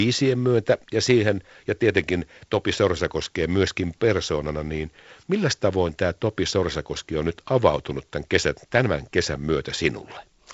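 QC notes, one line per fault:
The speech is carried through G.722 wideband telephone coding, with nothing above 7.7 kHz, a light hiss in the upper band and a slightly grainy lower band that fits the 48 kbit/s mode.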